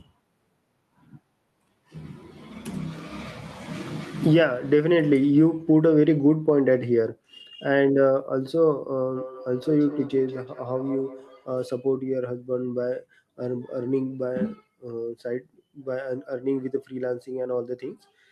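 From 9.17 s to 11.7 s the speech is followed by feedback echo between two devices: a second device in the same room replays this microphone's signal, the microphone picks it up again, and no echo canceller removes it. Each syllable returns roughly a fifth of a second later, thinner and ringing, at most about 15 dB below the speech. On a spectrogram, fainter copies of each syllable sit at that regular spacing; the waveform shows the same trailing echoes.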